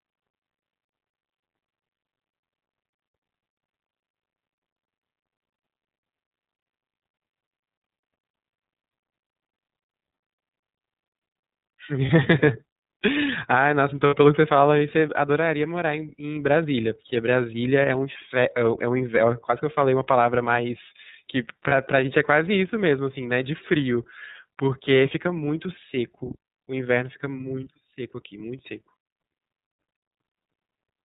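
From start to finish the speech has that iLBC codec sound, capped at 4 kHz, slightly rough and synthetic, which fits the 30 ms, 13.33 kbps mode. Then lost iLBC frames: at 12.06 s (30 ms), 14.07 to 14.16 s (60 ms) and 21.69 s (30 ms), the decoder fills in with a short, faintly buzzy held vowel, then snaps straight back.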